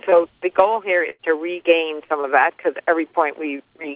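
At 1.1 s a burst of packet loss opens a gap running to about 1.22 s. The receiver fills about 86 ms by extending the last sound and letting it sink in level, so a voiced sound turns into a held buzz and anything else into a fading hiss, while about 90 ms of real audio never returns. On a spectrogram the band looks smeared and flat, then steps abruptly to new material; the waveform shows a decaying envelope before the resumption.

At 2.21 s comes a short concealed packet loss, lasting to about 2.27 s. Roughly 30 ms of audio went missing and about 29 ms was synthesized from the preceding sound, continued from its pitch if it was voiced or as shaped noise if not, then crossfaded back. It is heard as a quick smear or wobble. The spectrogram shows a brief stretch of blurred, repetitive texture. Throughout, the call path's band ends at 4 kHz, which fits G.711 A-law at 64 kbps.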